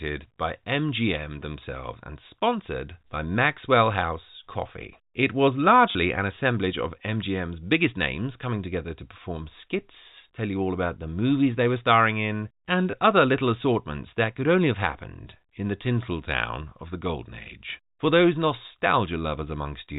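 At 5.92 s, just before "an assemblage of", about 30 ms of packet loss with the last packet repeated replays stale audio, giving a robotic stutter; a second 20 ms repeat at 12.91 s, between "were starring in and" and "other little assortments that", does the same.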